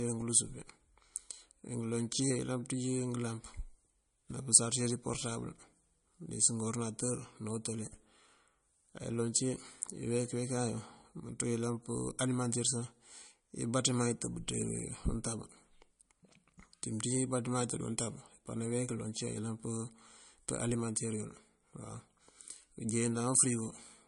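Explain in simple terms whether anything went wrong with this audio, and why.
Something did go wrong. The speech sounds dull and smeared from start to finish, with nothing above 10.6 kHz. It's likely low-bitrate audio saved at a high bitrate: squeezed hard into a small MP3, then re-saved larger, which can't restore what was lost.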